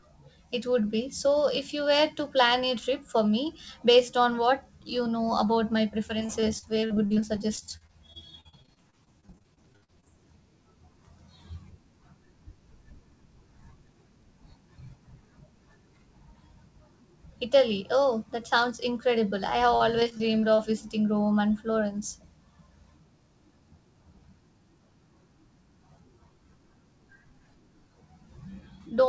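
From 6.08 to 10.08 s the speech breaks into repeated packet loss with a robotic sound: dozens of short dropouts, the longest about 58 ms, each patched by extending the preceding sound, so roughly a fifth of the stretch is concealment. The result is choppy, with pieces missing. The same fault returns more briefly from 19.76 to 20.60 s, with gaps up to about 39 ms. Throughout, the call path cuts off everything above 8 kHz.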